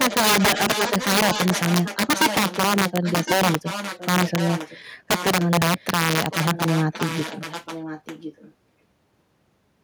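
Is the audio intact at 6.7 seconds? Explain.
No. Integer overflow runs through the whole clip, so it is present here too. The gain pushes peaks about 9 dB past the integer limit. Around 3 percent of samples wrap to the opposite sign instead of clipping. Each one jumps across the full range and produces harsh cracks on loud syllables.

An echo leak also covers this moment, from 6.18 to 8.54 s. A delayed copy of the speech returns about 1.06 s late, roughly 10 dB quieter. It is likely a far-end loudspeaker whose echo canceller let some of the microphone pickup through.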